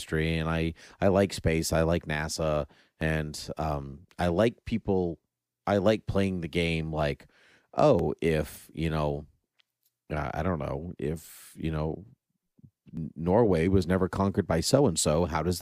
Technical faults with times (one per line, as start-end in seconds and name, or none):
3.01 audio missing between chunks
7.99 audio missing between chunks
12.97 audio missing between chunks